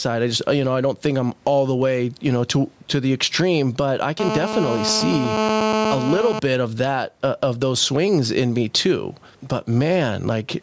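Gain pumping runs through the whole clip. The gain swings by around 10 dB with the louder stretches of speech, flattening the level contrast. The likely cause is input gain set far too high, with a fast limiter clamping every peak.

From 4.20 s to 6.39 s, between "the extreme but I" and "of that uh of", a GSM phone buzz sits at about 4 dB below the speech. A nearby 2G handset is bursting at 217 Hz, and the audio circuitry rectifies those radio pulses into a harsh, harmonic-rich rasp. It is nearly steady, as it is during a call.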